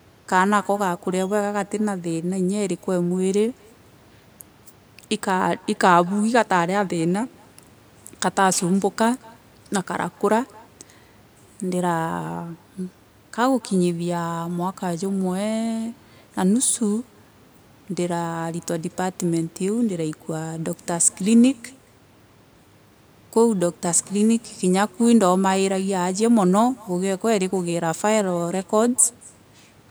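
A speech recording with echo and no canceller running throughout: the far end is playing the call over a loudspeaker, its microphone is picking that playback up, and nothing is subtracting it before it is sent back. The result is a faint returning copy of the speech, about 29 dB below it and trailing by roughly a fifth of a second, thinner than the original.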